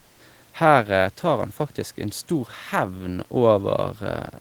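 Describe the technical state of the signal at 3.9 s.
At 3.9 s the audio is intact, with only the room's own background noise audible at about 37 dB below the speech.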